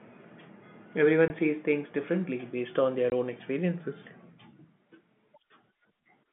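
At 1.28 to 1.30 s the speech cuts out. This is packet loss filled with silence: one 20 ms packet went missing, and the receiver played silence instead. The gap has hard edges. The same happens at 3.10 to 3.12 s.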